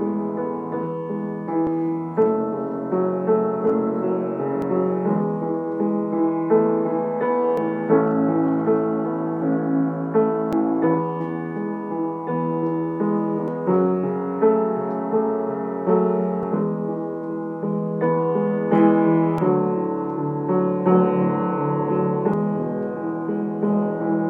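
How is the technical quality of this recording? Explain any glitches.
The recording has one recurring glitch: audio missing between chunks, at 1.67, 4.62, 7.57, 10.53, 13.48, 16.43, 19.38 and 22.34 s. Roughly every 3 s, about 50 ms of sound vanishes, likely dropped while the recorder closes one 3 s chunk and opens the next, so the audio jumps ahead. A waveform shows an abrupt seam with no silent gap, and a spectrogram shows a sharp vertical discontinuity at each point.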